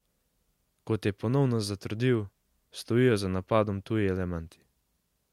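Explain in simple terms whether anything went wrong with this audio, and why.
Nothing went wrong here: the speech in the recording arrives intact, with no technical fault heard anywhere along the way.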